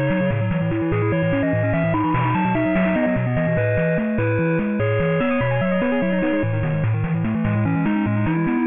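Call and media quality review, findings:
Aliasing, throughout the clip: gritty, metallic false tones folded down from above 3 kHz, spectrum running hard to that edge. Probable component: resampler with no anti-alias filter, fitting a drop to a 6 kHz rate. Aliases sit roughly 15 dB below the signal.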